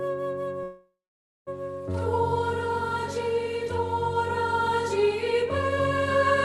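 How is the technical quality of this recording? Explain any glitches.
One glitch stands out: a call audio freeze from 0.63 to 1.49 s. The last sound drags on as a fading buzz or hiss, then goes silent for about half a second, likely because delayed packets let the jitter buffer run dry. Unlike a dropout, the audio resumes exactly where it paused, so nothing is lost, only delayed. The clip's top end stops near 12 kHz, consistent with the call codec's bandwidth.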